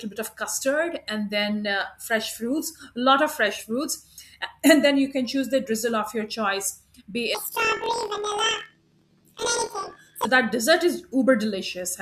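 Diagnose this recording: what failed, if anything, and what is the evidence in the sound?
From 7.35 s to 10.26 s the speech jumps an octave high and takes on a rapid, mechanical flutter at 41.7 Hz, yet its pace holds steady. This is planar audio read as interleaved, a sample-format conversion fault. Each 24 ms block stores all left samples and then all right samples, but it was read as alternating left-right pairs. So each block plays twice at double speed, first the left half and then the right, which raises the pitch 12 semitones and chops it at the block rate.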